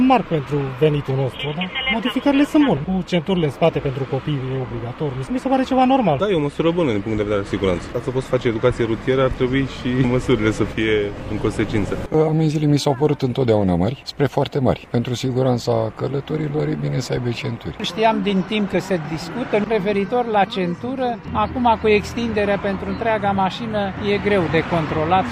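No technical fault can be heard anywhere in the recording. Nothing in it breaks, drops out or changes character at any point.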